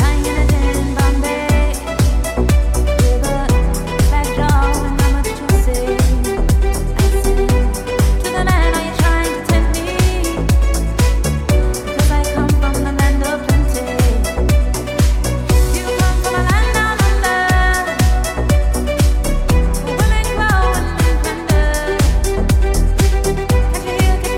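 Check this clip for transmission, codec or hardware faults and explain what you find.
Nothing faulty can be heard anywhere in this recording.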